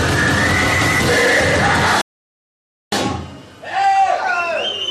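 At about 2.01 s the sound drops out into silence and stays gone until 2.92 s, then picks up exactly where it left off. That's a rebuffering stall: the player burned through everything it had downloaded and just sat waiting for more data before carrying on. Nothing gets skipped or lost, you simply get roughly 0.91 s of dead air wedged into the middle, so the whole thing runs that much longer.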